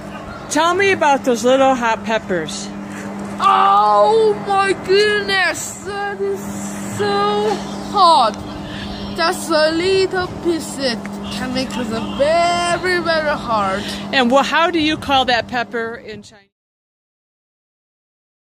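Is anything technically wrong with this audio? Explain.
No, nothing here is technically wrong; the level just eases down in a gentle, deliberate fade-out that begins around 15.5 s and finishes at 16.54 s, with no click or abrupt edge.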